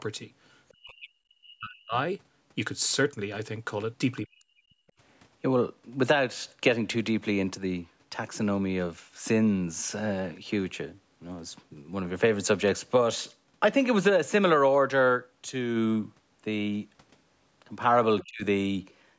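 At 0.72 to 1.96 s, 4.25 to 4.7 s and 18.23 to 18.44 s the speech drops sharply, by as much as about 40 dB, fading or breaking into fragments. This is speech suppressed in double talk, likely caused by an echo canceller mistaking the talker for loudspeaker echo while the far side was also speaking. On a waveform the envelope collapses in those spans. A spectrogram shows the energy dropping in those spans, within the 8 kHz ceiling of the call's microphone processing.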